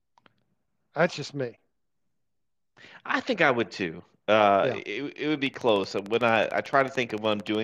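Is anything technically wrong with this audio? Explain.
Yes. From 5.47 s to 7.56 s, just after "it it would be", there is a train of clicks. Something is injecting short pulses into the signal path at a steady 13.4 per second, likely electrical interference from nearby equipment or a faulty connection or power supply. The result is about thirty evenly spaced, similar ticks laid over the speech and its pauses alike, peaking about 5 dB above the speech itself.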